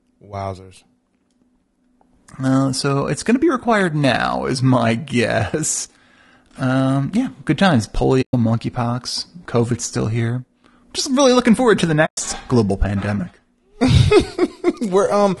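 Speech throughout carries a rough, grainy texture with noise filling the gaps between harmonics and a thin top band. The likely cause is low-delay AAC compression (AAC-ELD) at a low rate, around 32 kbps. AAC frame loss with muting opens two soft-edged holes, at 8.21–8.34 s after "yeah good times" and at 12.05–12.18 s after "looking forward to the". In each, the sound fades out and back in, consistent with several consecutive frames being zeroed by the decoder.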